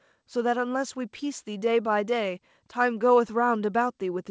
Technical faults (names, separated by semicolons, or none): none